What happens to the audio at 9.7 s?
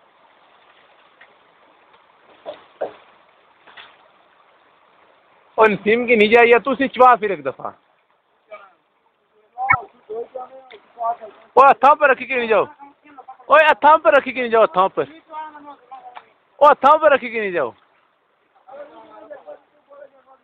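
At 9.68 s the audio skips forward and the next 70 ms or so, to 9.75 s, come out as a brief chirp, noise burst or gap. The likely cause is a broken MP3 bit reservoir: after frames were lost, the following frames of about 26 ms each read another frame's data.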